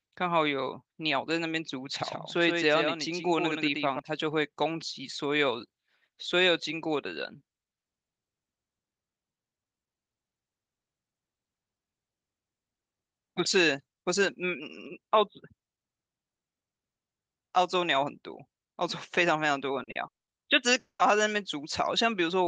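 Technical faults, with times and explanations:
2.01–3.99 s, doubled audio track: The speech was most likely captured a second time through a slower path, so a second full-band copy runs roughly 150 ms behind the original at about 5 dB lower. This produces a hard, slapback-like echo with no decay or room colour. It switches on abruptly at 2.01 s and cuts off just as sharply at 3.99 s.
19.83–19.90 s and 19.91–19.98 s, short concealed packet loss: Two back-to-back 40 ms chunks of the call failed to reach the decoder in time. Each time, the receiver invented a replacement by stretching the sound just before the gap, then blended back into the real signal. The result is a quick double smear or wobble in the speech.
20.07–20.30 s and 20.79–21.02 s, long network dropout: Each stretch most likely reflects about 200 ms of audio that never arrived. The receiver first carried the last sound forward as a fading buzz or hiss, then gave up and left near-silence, for about 180 ms in the first gap and 100 ms in the second. 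The speech then resumes without the lost part, so it jumps ahead rather than picking up where it stopped. This all plays over a call codec path whose top end stops around 12 kHz.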